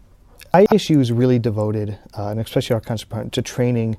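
Speech with chunks out of order between 0.54 and 0.72 s: one 60 ms chunk plays two chunks late, giving a jumbled moment with three hard joins. Unlike a dropout or a repeat, nothing is missing or doubled; only the order is wrong.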